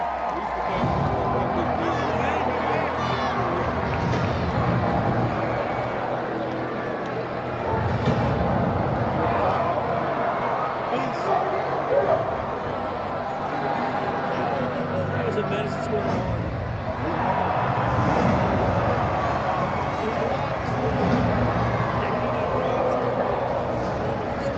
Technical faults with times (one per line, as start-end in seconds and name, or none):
none